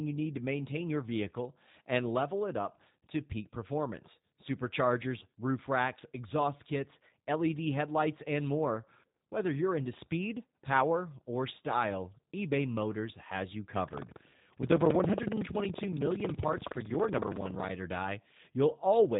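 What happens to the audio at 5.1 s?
At 5.1 s the speech carries the same G.729 codec damage present across the whole clip, not an isolated event. The sound points to an 8 kbit/s coder of this type, which discards the waveform and resynthesises each 10 ms frame from a vocal tract filter, a pitch predictor and a few excitation pulses. Nothing above 3.8 kHz survives, so the speech sounds dull and band-limited, with a plainly audible rough, synthetic texture.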